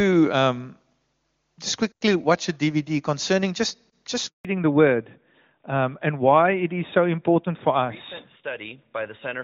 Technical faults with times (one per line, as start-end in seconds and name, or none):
4.27-4.45 handover gap
4.45-9.44 fallback to narrowband